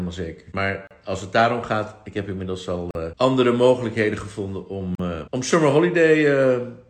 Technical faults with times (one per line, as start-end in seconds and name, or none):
0.87-0.91 gap at a join of encoded pieces
2.91-2.95 gap at a join of encoded pieces
4.95-4.99 gap at a join of encoded pieces